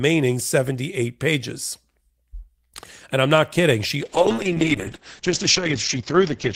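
From 4.03 s to the end, the speech turns muffled and rough, its top end gone. This is a call bitrate drop: the encoder's rate fell from 32 to 8 kbps, forcing coarser coding and narrowing the bandwidth from 20 kHz to 8 kHz, without recovering.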